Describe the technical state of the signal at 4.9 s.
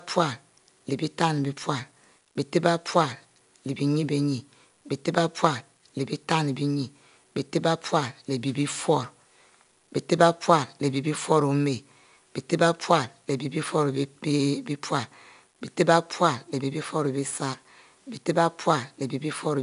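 At 4.9 s the speech carries 4-bit ADPCM compression, present throughout. Each sample is coded as a coarse 4-bit step from a prediction, so a gritty hiss rides on the louder syllables, and nothing lies above 10.6 kHz, which fits roughly 88 kbps at a 22 kHz sample rate.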